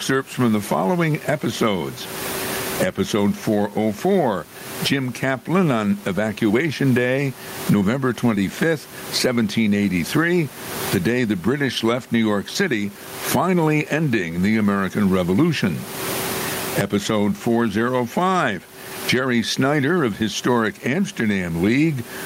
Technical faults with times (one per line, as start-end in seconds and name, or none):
0.00-22.26 gain pumping
0.00-22.26 clock drift between sender and receiver
0.11-22.10 repeated timing corrections